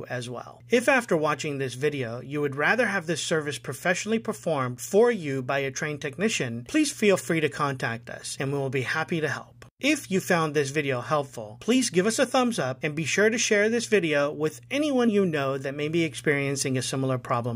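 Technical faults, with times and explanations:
10.03 s and 15.07 s, compressed frames skipped: at each point one compressed frame, which fits a frame length of 23.2 ms, never reached the output, either because it was missing from the stream or because the decoder rejected it as corrupt. Playback jumps forward by about one frame each time, so roughly 20 ms of audio is lost.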